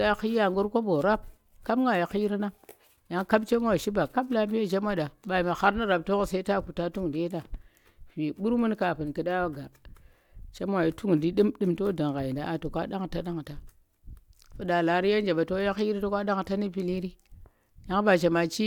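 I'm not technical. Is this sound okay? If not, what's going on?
Yes, nothing stood out as a problem when listening to this recording.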